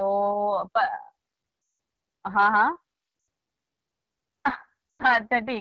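Speech that sounds rough and raspy throughout, which fits the AMR wideband (HD Voice) codec running at one of its two lowest rates, around 8.85 kbit/s, where the vocal tract model no longer has the bits to describe the voice cleanly. The sound also drops out briefly at 1.61 to 1.79 s, 3.19 to 3.27 s and 4.91 to 5.03 s, lasting about 180, 80 and 100 ms. These are lost AMR speech frames: the decoder stretches its last good settings with falling gain, so the sound drains away quickly before returning weak and rough.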